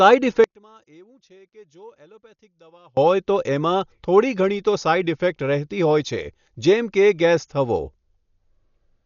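The whole clip sounds dull and rough, with nothing above 6.9 kHz and a fluttering noise around tones. That's likely heavy Dolby Digital compression at a low bitrate, somewhere near 48 kbps.

From 0.44 to 2.97 s, the speech sinks by about 31 dB to a faint remnant, then comes back before "હોય તો". One channel inverted is the likely cause, so the shared centre cancels in mono.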